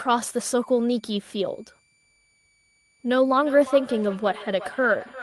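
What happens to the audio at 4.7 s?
A feedback echo between two devices is under way, running from 3.29 s to the end: another device plays back this microphone's signal, which gets re-captured, so speech returns about every 0.4 s, peaking at about 14 dB below the direct speech. Underneath, a switching supply whistle sits constantly between 2.29 and 2.41 kHz at about 40 dB down, a thin high tone with slight pitch drift.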